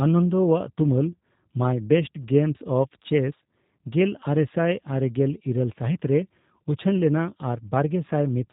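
Speech coded with G.729 throughout: the spectrogram stops dead at 4 kHz, and the buzzy, slightly synthetic pulse-built texture sounds like a low-bitrate VoIP codec running near 8 kbit/s.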